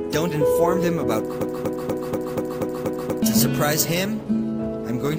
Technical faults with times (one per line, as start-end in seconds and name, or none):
1.41-3.22 broken-record loop